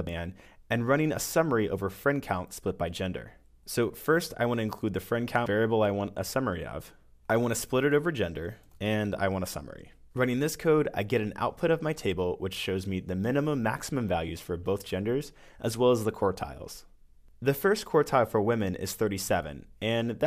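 Damaged data in a compressed stream shows up twice, at 0.07 s and again at 5.46 s. At each point a stretch of the encoded stream carries corrupted bytes, so the decoder cannot read those frames correctly. It loses its place and has to search for the next valid frame header before it can continue. Each of the two moments sounds like a brief blip or chirp breaking into the audio.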